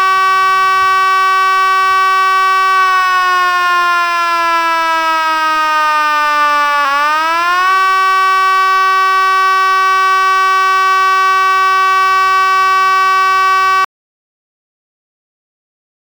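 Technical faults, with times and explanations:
13.85 to 16.08 s, audio dropout to silence. The sound cuts off abruptly at 13.85 s and never returns. The last 2.24 s to the end of the clip are silent. No room tone or noise floor remains. The signal likely stopped reaching the recorder, through a lost connection or a mute, while recording carried on and wrote silence. Whatever sound occurred in that stretch is gone.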